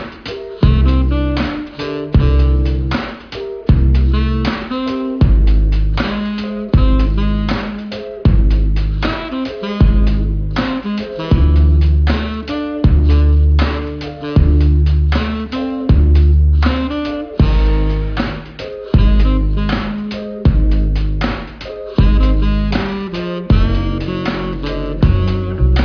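No technical faults are audible.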